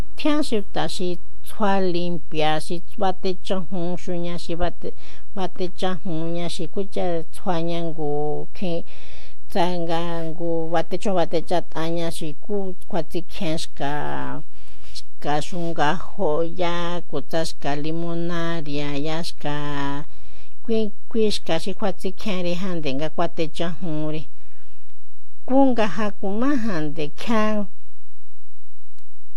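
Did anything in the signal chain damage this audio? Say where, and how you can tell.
Yes, there's a DC offset of about -12 dBFS across the whole speech clip, likely from the converter or analogue front end. It's inaudible, but eats headroom and shows as constant energy at 0 Hz.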